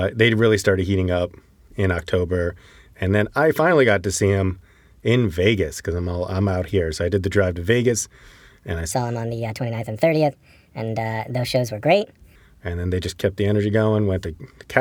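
A section at the wrong speed runs from 8.92 to 12.36 s in this speech clip, starting just after "and I": the audio plays 1.36 times too fast, so pitch jumps about five semitones and delivery sounds hurried, likely from that stretch being resampled against the wrong clock.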